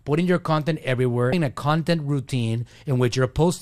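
At 1.30 to 1.33 s, just after "putting your content" and before "a content", there is damaged data in the compressed stream. Corrupted bytes leave the decoder unable to read those frames, and it loses sync until the next valid header. The result is a brief chirp or blip.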